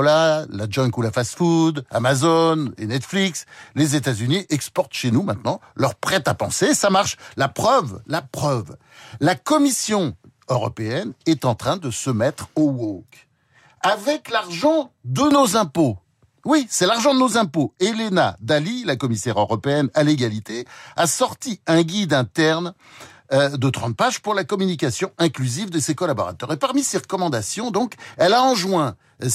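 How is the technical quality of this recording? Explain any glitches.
No technical faults can be heard anywhere in the recording; the speech signal stays intact and continuous throughout, with nothing disturbing it.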